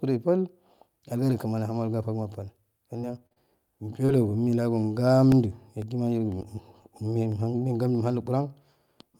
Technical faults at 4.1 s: short concealed packet loss

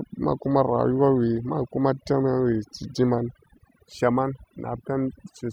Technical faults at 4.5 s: overdone noise removal

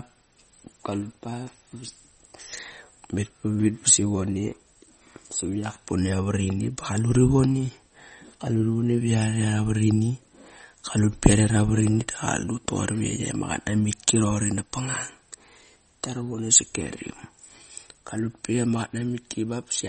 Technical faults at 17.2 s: MP3 compression

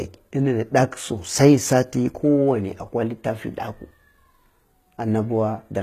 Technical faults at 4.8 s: HE-AAC compression

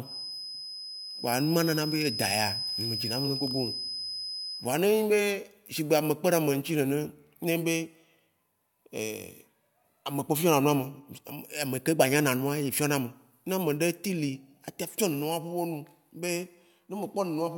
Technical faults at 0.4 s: feedback whistle

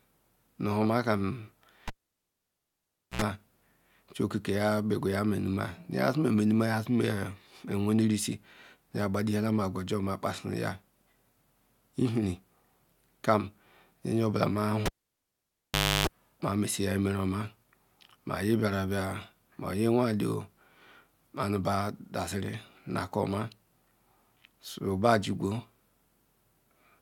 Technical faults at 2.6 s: cable pulled and plugged in

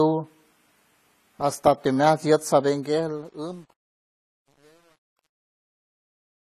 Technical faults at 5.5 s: AAC compression; truncation distortion on a fade

